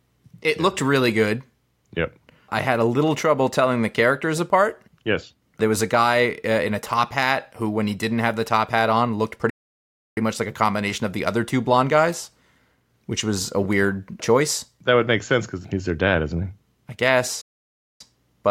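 Playback stall at 9.50 s and again at 17.41 s: the speech cuts out mid-flow after "top hat on looked", goes silent for about 0.67 s, and resumes at 10.17 s with "much like a combination". The second gap follows "dad isn't he I" and lasts about 0.59 s, until 18.01 s. Each silence is likely the player running short of data or its thread being blocked, so output halts until it catches up.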